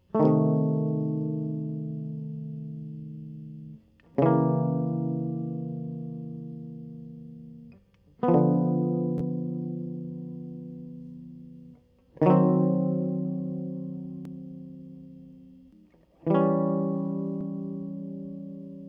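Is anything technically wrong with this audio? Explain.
No, nothing technically wrong turns up in this music recording.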